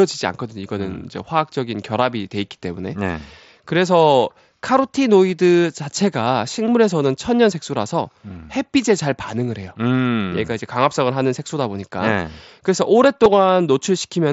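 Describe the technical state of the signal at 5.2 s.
At 5.2 s the speech is intact, passing through the Bluetooth mSBC headset codec with no fault at that moment.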